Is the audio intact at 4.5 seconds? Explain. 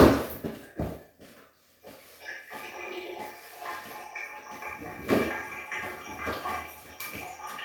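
Yes, at 4.5 seconds the sound plays through intact, with no dropout, click, distortion or other fault at that moment.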